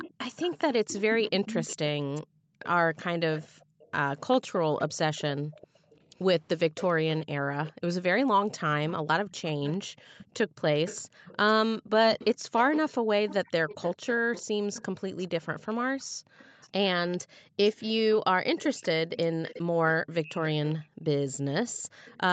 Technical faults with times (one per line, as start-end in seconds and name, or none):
0.00-22.32 echo leak
2.25-3.80 background gated by the echo canceller
5.41-5.93 background gated by the echo canceller
9.94-12.53 background gated by the echo canceller
16.04-17.57 background gated by the echo canceller
20.83-22.05 background gated by the echo canceller